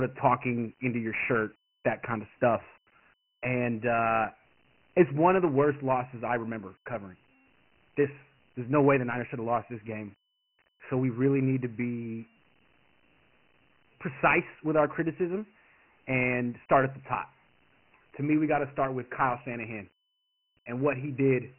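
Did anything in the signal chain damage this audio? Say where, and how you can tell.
Yes, at the codec stage, across the whole clip: this speech carries Dialogic VOX ADPCM damage. Nothing survives above 3 kHz, which points to 4-bit samples at 6,000 a second, about 24 kbps. A heavy gritty hiss rides on the speech and rises and falls with it, because the adaptive step size quantises each sample coarsely. A plain low-pass or G.711 telephone path would sound band-limited but clean, without that signal-following grit.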